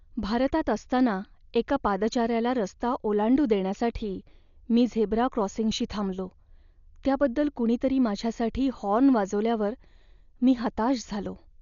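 From start to finish the speech is dull and cut off above about 6.9 kHz, with a rough, fluttering hiss clinging to tones, most likely heavy Dolby Digital compression at a starved rate, something like 48 kbps, where empty frequency lines get refilled with dither noise.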